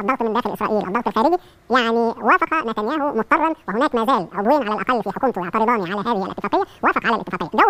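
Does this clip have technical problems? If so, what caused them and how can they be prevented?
Yes. Throughout, the sound runs at twice its proper speed and a full octave (12 semitones) high. This is audio read two samples at a time: the reader took each pair of samples as one frame, wrongly assuming two channels or double-width samples. It can be prevented by having the reader take the channel count and sample format from the file's header.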